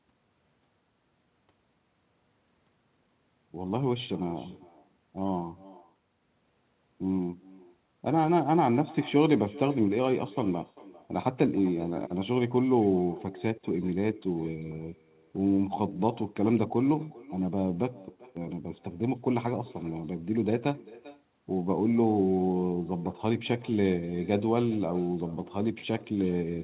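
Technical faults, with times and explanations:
throughout, echo with no canceller: the far end plays the call aloud and its microphone returns it unremoved, so every phrase recurs roughly 0.4 s later as a faint copy about 21 dB down, thin, further dulled by the 4 kHz call bandwidth.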